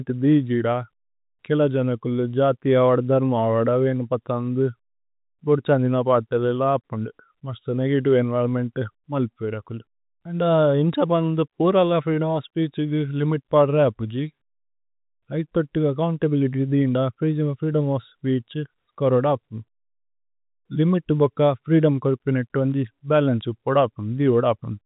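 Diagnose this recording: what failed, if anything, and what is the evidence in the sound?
Nothing failed in this recording.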